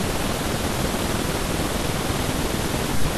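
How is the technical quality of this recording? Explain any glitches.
The recording is technically flawed. For the whole clip, the audio was read two samples at a time, giving double speed. The reader treated each pair of samples as one frame, as if the data had two channels or wider samples. Speech therefore runs at 2.0 times normal speed and sits an octave high.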